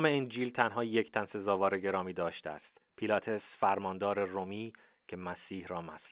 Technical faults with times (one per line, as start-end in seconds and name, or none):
none